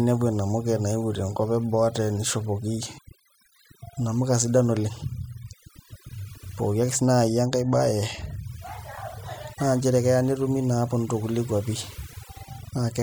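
From the first second to the last, this speech clip carries the marks of overdone noise removal. A noise reduction stage was pushed too hard, so whenever a frequency band drops near its idea of the noise floor it gets pulled way down or shut off, and the softer parts of the voice go down with it. What you hear is a background that drops away and breaks up into little twinkling specks.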